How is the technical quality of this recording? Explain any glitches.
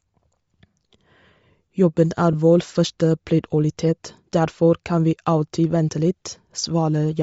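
Technical quality is limited by audible codec damage throughout and one brief dropout.

Across the whole clip the speech has a breathy, grainy upper range, with the highs replaced by noise-like texture. This is likely Bluetooth LC3 compression at a low bitrate, consistent with about 32 kbps and 10 ms frames, where the encoder discards upper-band detail and the decoder fills it with noise.

At 2.33 s there is a short smeared blip where the signal briefly turns noisy. It matches lost LE Audio frames, consistent with a single missing 10 ms frame. The decoder concealed the gap by repeating the previous spectrum with randomised signs, which trades clarity for a short hiss-like blur.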